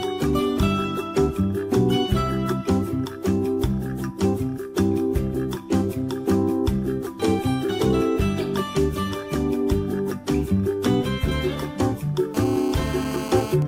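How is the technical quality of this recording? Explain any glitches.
Two bursts of GSM interference from a nearby 2G phone mar the end of the recording.

From 12.34 to 13.54 s there is GSM phone buzz. The phone is on a call, transmitting radio bursts about 217 times a second, and the audio circuitry rectifies them. The result is a hard, raspy 217 Hz buzz rich in harmonics, about 11 dB below the signal.

At 13.62 s a brief tick of GSM signalling bursts follows, consistent with the phone sending only sparse burst groups while its user is silent during the call. The rectified pulses produce a short click-like buzz at the same 217 Hz rate, roughly 10 dB below the signal.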